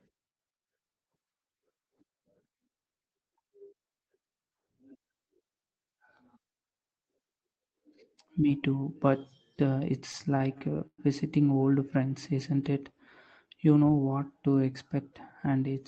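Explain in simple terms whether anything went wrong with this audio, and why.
Between about 10.11 and 11.00 seconds, packets of audio reached the listener's end late, and the small waiting store that smooths out delivery kept running dry. That is called repeated stalls (stutter). Four times the receiver stretched the last bit of sound to cover the wait, the longest lasting about 115 ms, roughly a fifth of that stretch in all. Nothing is lost, but the speech hesitates and drags there. The call's ordinary coding, which stops the highs around 8 kHz, is not a fault.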